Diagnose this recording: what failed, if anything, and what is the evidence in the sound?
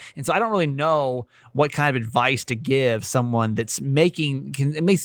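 Nothing in this speech recording points to a failure at any stage, from wiring and conversion through to playback. The Opus voice compression leaves only light traces, consistent with a hybrid fullband stream at 20 kbps in 20 ms frames that keeps the band open above 8 kHz rather than narrowing it.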